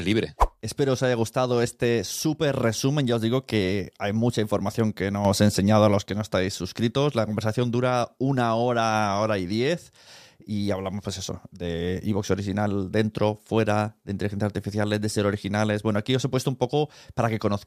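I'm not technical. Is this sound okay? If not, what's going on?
No. There is a sudden gain jump in this speech. At 5.25 s, right after "hay mucha información que", the level abruptly gets louder. The voice and the background noise rise together, all at once, with no fade. It stays that way for about 0.8 seconds. At 6.06 s it drops back, just before "que no estáis suscritos". The likely cause is a volume setting applied instantly instead of being eased in smoothly.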